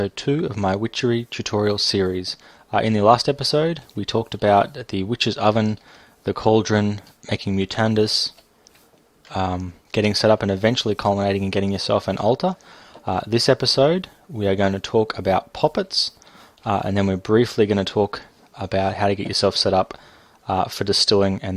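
No technical faults can be heard anywhere here.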